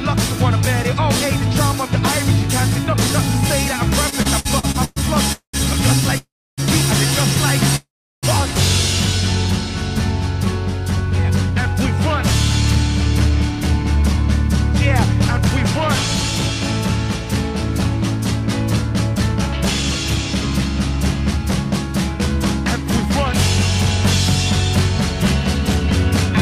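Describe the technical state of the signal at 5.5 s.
At 5.5 s you're in the middle of a call audio freeze running from 5.32 to 5.55 s. The last sound stretches into a fading buzz, drops to silence for about 0.11 s, then picks up where it stopped. Likely delayed packets draining the jitter buffer, adding 212 ms of delay.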